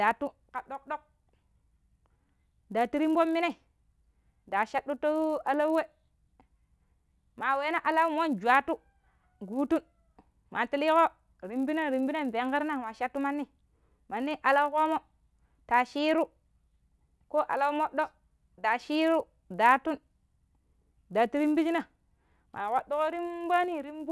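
Throughout, the resampler restarted on every block. Each 10 ms block was converted from 48 kHz to 24 kHz alone. Edge errors form a 100 Hz buzz under the speech.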